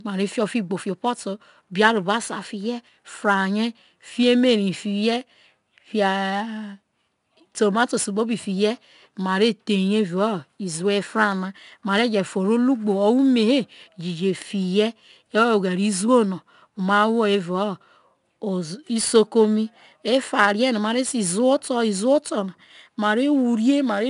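4-bit ADPCM compression runs throughout. Coarse four-bit steps leave a gritty hiss that follows the speech level. Nothing sounds above 10.6 kHz.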